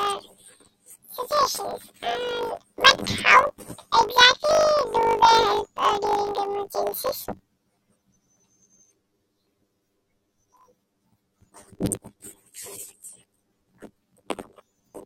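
This speech clip has planar audio read as interleaved throughout. Each 20 ms block of left then right samples is read as alternating pairs. Both halves play at double speed, an octave high. The result is a robotic buzz at 50 Hz.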